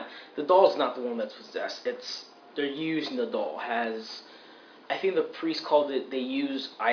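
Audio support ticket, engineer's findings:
Listened through the full clip and nothing stood out; no findings to log against any component.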